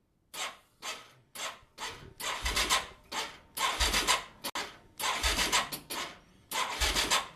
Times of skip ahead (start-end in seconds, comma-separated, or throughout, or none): none